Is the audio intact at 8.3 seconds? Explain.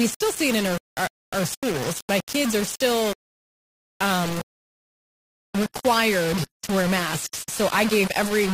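No. At 8.3 seconds the speech has two faults.

The first is low bit depth without dither, present across the whole clip. The sound is grainy, and the grit rises and falls with the speech. It sits only about 10 dB below the speech, and quiet moments sputter or drop out. That fits amplitude rounded to about 4 bits, which is likely the cause. Because there is no dither, the rounding error follows the signal instead of becoming steady hiss. On a waveform the trace moves in coarse staircase steps. On a spectrogram, broadband noise appears and disappears with each syllable.

The second is an adaptive stream at a lower bitrate, from 5.28 s to the end of the clip. The treble suddenly turns thin and synthetic, with no gap in the audio. That points to the stream dropping from a 96 kbit/s AAC-LC version to a 24 kbit/s HE-AAC one after the connection slowed. HE-AAC codes the upper band sparsely and rebuilds much of it from the lower band, which gives the treble that artificial sound. 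On a spectrogram the energy above 14.9 kHz stops abruptly at 5.28 s. The upper band below that line looks blotchy and copied.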